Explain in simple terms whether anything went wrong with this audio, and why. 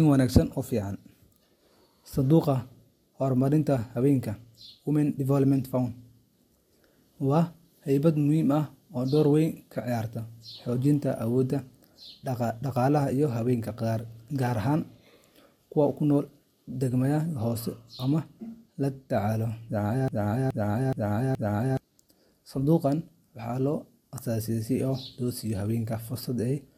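A broken-record loop runs from 20.08 to 21.77 s: a 0.42-second piece of the speech plays four times back to back. Most likely the player, encoder or stream stalled and kept resending its last fragment, so whatever was said there is lost.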